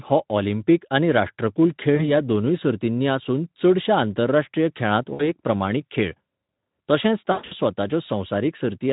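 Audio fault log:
1.95 to 7.54 s, VoIP packet loss concealed by the speech codec: three dropouts, at 1.95 to 2.07 s (about 40 ms lost), 5.13 to 5.31 s (about 60 ms) and 7.31 to 7.54 s (180 ms scattered over 200 ms, longest gap 120 ms). The decoder repeats its last pitch and filter at falling gain, giving a buzzy, fading smear. On a spectrogram, harmonics run flat and dim. The waveform shows a repeating, decaying cycle before the sound recovers.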